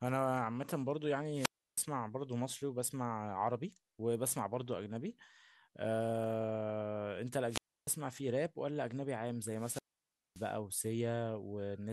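A speech recording with three wireless microphone squelch dropouts, at 1.32–1.83 s, 7.48–7.89 s and 9.51–10.55 s. Each time, hiss climbs briefly as the FM carrier weakens, then the receiver's squelch closes and the output goes nearly silent before the signal recovers and speech resumes. The muted gaps last about 320 ms, 300 ms and 580 ms, the last being the longest loss of RF signal.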